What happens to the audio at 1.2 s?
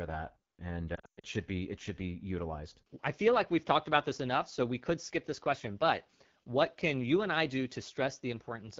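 At 1.2 s the audio is inside a burst of lost AMR speech frames, from 0.95 to 1.25 s. About 220 ms of speech is missing, spread over 280 ms, and the longest gap runs 120 ms. The decoder repeats its last good pitch and vocal tract settings at falling gain. The speech warbles and drops to near silence, then returns weak and rough.

The whole clip also carries the AMR wideband (HD Voice) codec at a low rate, which fits the 8.85 kbit/s mode. Damage is plainly audible. Speech is modelled only up to 6.4 kHz, with noise above that, so it sounds raspy and coarse.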